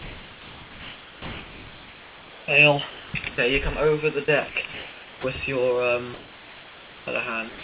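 Throughout the clip there is a constant, even hiss sitting only about 10 dB below the signal. This is low bit depth with dither, and the level of that floor points to roughly 6 bits. The noise was added before rounding, so the rounding error became a smooth hiss. It never turns into crunchy, level-dependent distortion, and it never rises or falls with the sound. That is what separates it from plain truncation. The band stops at 4 kHz, which fits the G.711 call path.

From 2.9 to 3.14 s, and again from 4.73 to 5.24 s, the background is swapped for comfort noise. In these stretches the background is about 20 dB below the loud parts. The likely cause is the sender's voice detector pausing transmission during quiet moments, with the receiver filling the gap with synthetic noise. The real background texture gives way to a flat, featureless noise. The first time it is about 1 dB quieter, and the second time its level is unchanged. 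Because no foreground sound is lost, only the character of the background changes, which is how this differs from a dropout.

At 4.25 to 4.28 s, 4.49 to 4.55 s and 7.49 to 7.64 s, sound is dropped by the voice detector. The detector likely took real sound for background and stopped sending. About 20 ms, 40 ms and 90 ms of actual sound vanish into the same steady noise. Unlike the background swaps, something audible goes missing. The final dropout runs to the end of the clip, so the tail simply dissolves into noise.

At 5.21 to 5.24 s the onset is clipped by the voice detector. As the second comfort-noise stretch ends, the detector is likely slow to register that sound has resumed, so the first 30 ms are never sent. The sound enters abruptly, missing its soft beginning. The loss sits at the start of the returning sound, not in its middle or its end, which marks it as onset clipping rather than a mid-sound drop.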